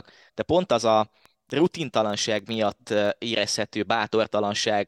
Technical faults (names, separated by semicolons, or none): train of clicks